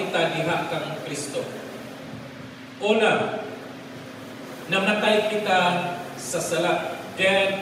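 No technical faults can be heard anywhere in the signal.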